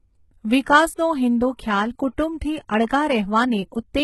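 Pre-echo at 0.65 s in this speech clip puts a brief hiss, about 10 ms long, just before "હિંદુ ખ્યાલ કુટુંબથી અળગા". The codec spread quantisation noise sized for the loud onset across its whole block, so the quiet gap ahead fills with noise and the attack sounds smeared. Throughout, the sound carries heavy damage that is likely HE-AAC compression, fitting HE-AAC v2 at around 16 kbps. Nothing remains above 11.8 kHz, and the treble is rebuilt from copied lower bands, so sibilants come out gritty and metallic.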